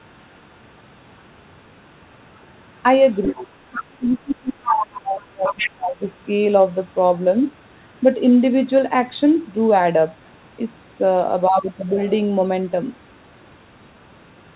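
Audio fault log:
1.17–1.22 s, 2.49–2.81 s, 3.14–4.17 s, 4.63–5.01 s, 5.46–5.71 s and 7.16–7.48 s: other side's voice leaking through. A second talker surfaces behind the main speech in these patches, the likely cause being loudspeaker sound that the echo canceller failed to remove. It is barely audible at 1.17 s, 2.49 s and 7.16 s. It is strong from 3.14 s, and around 4.63 s it is about as loud as the main talker. Unlike a crosstalk hum or bleed, it is a second voice coming through in scraps and longer stretches.
3.32–6.16 s: speech suppressed in double talk. In this span the main talker dips, falling by as much as about 25 dB across roughly three seconds of affected sound. The echo canceller likely could not tell the near talker from the echo and attenuated both. Unlike a codec's band limit, these dips come and go, while the 4 kHz ceiling of the telephone-band call path stays fixed across the whole clip.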